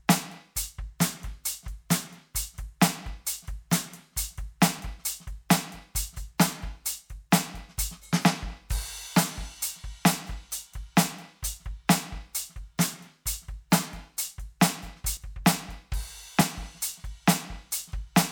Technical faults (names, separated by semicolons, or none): dropped buffer (overrun)